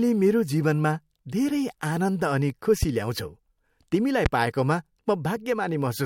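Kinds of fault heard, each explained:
Loud pop: A sudden electrical pulse is added to the speech, likely from a plug, switch, static discharge or driver glitch, and the circuits after it shape it into a sharp thump. Two single pops land at 2.83–2.85 s and 4.26–4.29 s, each under 30 ms and peaking well above the speech, roughly 15 and 20 dB louder. Unlike a dropout, the speech carries on underneath. Unlike a faint digital click, each pop is loud and has audible body.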